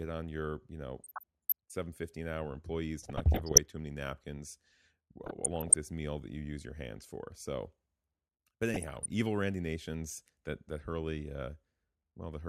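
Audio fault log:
1.00–1.52 s, 3.03–3.58 s, 5.24–5.74 s and 8.74–9.06 s: DAB burbling. Short blips of noise in narrow frequency bands interrupt the speech in four patches of about half a second, the last about 0.3 s. Bit errors from weak reception, on the order of half a percent, got past the error correction into the MP2 audio. Corrupted samples put noise into single sub-bands, and any scale factors that were hit make a sub-band jump in level for up to a frame.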